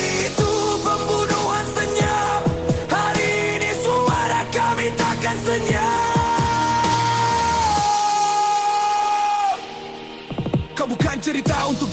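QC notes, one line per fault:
No faults heard.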